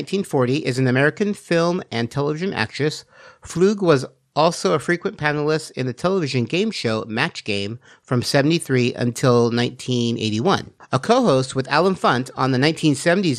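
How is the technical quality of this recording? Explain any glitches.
The recording carries one fault that runs through the whole speech: MP2 compression damage that is plainly audible. The likely cause is MPEG Layer II encoding at a low rate, consistent with about 80 kbps. The encoder splits the spectrum into 32 sub-bands and, short of bits, switches off upper bands and coarsely quantises the rest. The speech therefore sounds dull, with a gurgling, granular texture as bands flicker on and off.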